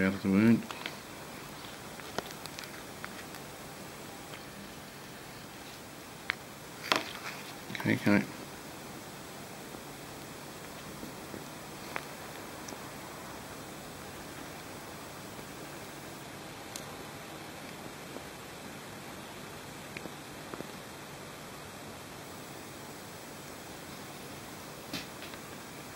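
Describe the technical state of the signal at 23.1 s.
Nothing is wrong at 23.1 s; the signal is intact at that moment, with no dropout, click, distortion or other audible fault.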